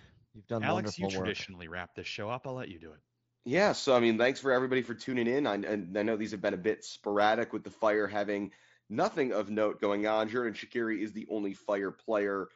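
No faults to report: the speech comes over an mSBC wideband Bluetooth headset link, which limits it to 8 kHz and adds a light grain on louder passages, as that codec does.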